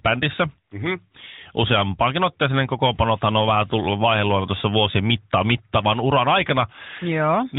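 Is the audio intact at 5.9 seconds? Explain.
Yes, at 5.9 seconds the speech is intact, with no dropout, click or distortion, only the narrow, phone-like band of the AMR narrowband mobile codec, which cuts everything above 4 kHz.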